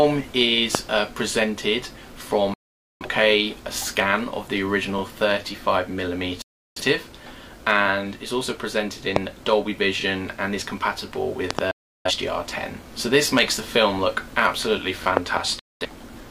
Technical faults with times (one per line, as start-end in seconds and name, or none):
0.75-0.77 loud pop
2.54-3.06 digital broadcast dropout
6.42-6.82 digital broadcast dropout
9.16-9.18 loud pop
10.01-10.04 overlapping chunks
11.51-11.61 loud pop
11.71-12.11 digital broadcast dropout
15.04-15.06 overlapping chunks
15.17-15.39 loud pop
15.59-15.85 digital broadcast dropout